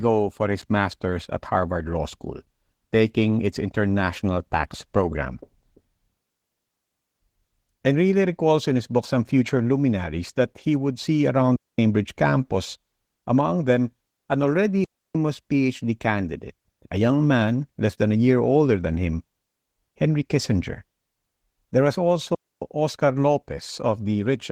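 It's a speech recording carrying Opus voice compression from start to finish, and the codec damage is plainly audible: the voice has that slightly hoarse, synthetic edge, with a muffled sound. That fits a hybrid setup at around 16 kbps, where the linear-prediction coder handles the lower band and a thin transform layer patches in everything above 8 kHz with too few bits. On top of that there are three digital wireless dropouts, each a clean hole of near-silence with no crackle or noise burst around it: 11.56 to 11.79 s (about 226 ms), right after "he would see around" and before "campus among them an"; 14.84 to 15.15 s (about 305 ms), following "among them an already"; and 22.35 to 22.62 s (about 273 ms). That's the receiver losing too much data and muting with a quick fade rather than passing garbage through.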